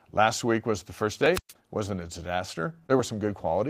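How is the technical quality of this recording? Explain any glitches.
Two faults are audible in the speech.

From 1.32 to 1.53 s there is a wireless microphone squelch dropout. The FM radio signal fades until the receiver's squelch closes, muting the output for about 122 ms. Hiss rises briefly, near silence follows, then the voice returns.

At 2.87 to 2.91 s comes a short stall from a late packet. A packet missed its playout time, so the receiver held the last sound for 22 ms until it arrived, then resumed where it left off. Nothing is lost; one sound lingers slightly too long.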